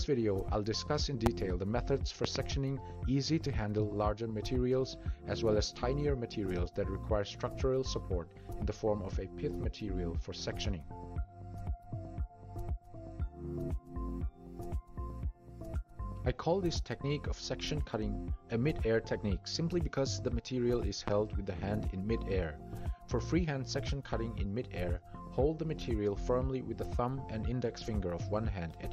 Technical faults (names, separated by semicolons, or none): loud pop